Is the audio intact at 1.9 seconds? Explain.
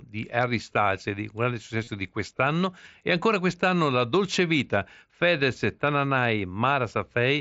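No, concealed Bluetooth headset packet loss spans 1.84 to 1.87 s, between "di un grande" and "di quest'anno". About 30 ms went missing, which fits four lost frames. The receiver filled the gap by looping a recent stretch, giving a short buzzy tone and a slight warble as real audio resumes. A spectrogram shows frozen, repeating harmonic bands, and the waveform shows repeated identical cycles.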